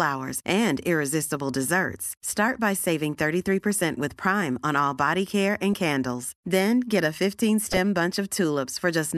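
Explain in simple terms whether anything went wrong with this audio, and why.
Two brief glitches interrupt the speech: one at 5.73 s, right after "all body care and", and a louder one from 7.71 to 7.78 s, after "get a". This is a corrupt frame decoded. Damaged chunks of compressed audio were played anyway, putting sound at the wrong pitches for a moment.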